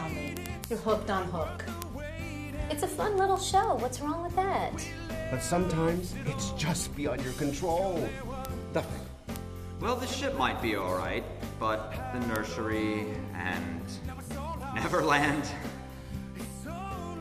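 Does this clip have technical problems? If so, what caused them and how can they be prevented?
Yes. Word clock ticks run through the whole clip, from 0.19 s to 17.17 s. They are sharp ticks of uneven strength at a steady rate, roughly ten per second. They arise on a digital link when the receiving device runs on its own clock rather than locking to the sender's. The two clocks drift apart by roughly 200 parts per million. At each slip a few samples are misread, and a single sample is dropped or repeated. To prevent this, lock the receiving device to the incoming signal or to a shared master word clock before recording.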